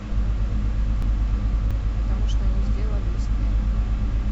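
Between 1.02 and 1.71 s, chunks out of order: one block of about 0.17 s was delivered late and plays after the three blocks that should have followed it. Nothing is lost, but the speech jumbles briefly, with three hard joins.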